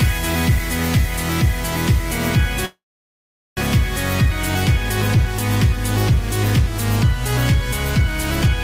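Packets were most likely held up in transit long enough for the jitter buffer to run dry, producing a call audio freeze from 2.65 s to 3.60 s. The receiver bridges the gap by stretching out the last sound for about 915 ms. It decays into silence for roughly the final 790 ms. When the audio resumes it continues exactly where it stopped, with nothing lost, but everything afterwards now arrives 915 ms later than before.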